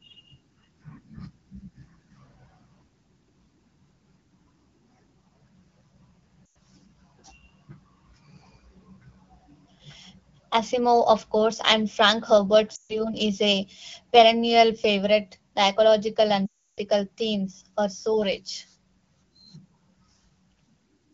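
Lost AMR speech frames occur at 6.48 to 6.55 s, 12.75 to 13.03 s just before "is a perennial favorite", and 16.46 to 16.80 s before "themes are so rich". The decoder repeats the last good sound at falling gain. Speech drops to near silence within two frames, then returns rough.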